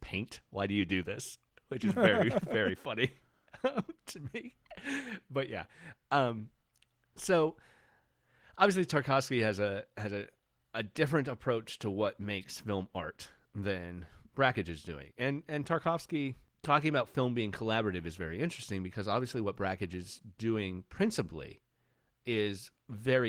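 Listening to the speech recording turned up nothing that stood out as a technical problem at any point.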